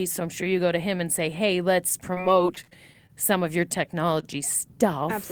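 At 2.14 to 2.19 s there is a short concealed packet loss. About 20 ms of audio never arrived in time, and the receiver covered the hole with roughly 22 ms of synthesised continuation, extrapolated from the preceding sound and then cross-faded back into the real signal. The result is a brief smear or wobble in the speech rather than a clean gap, and a short consonant in that spot can be lost.

From 2.55 to 3.11 s, just before "some of your", the speech suffers repeated packet loss and takes on a choppy, robotic quality. What sounds like five separate dropouts occur in close succession, the longest about 33 ms, with around 60 ms of real audio missing in total. Concealment fills about 103 ms, roughly a fifth of the stretch, and because each patch barely recovers before the next hole, the sound turns fragmented.

At 4.20 to 4.25 s, right after "some of your", there is a short stall from a late packet. 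The packet arrived about 25 ms later than expected, so the jitter buffer ran dry, and the receiver held the last sound for roughly 25 ms until the data caught up, then resumed from the same point. Nothing is missing, but that moment is audibly drawn out, with a slight buzz or dip in level.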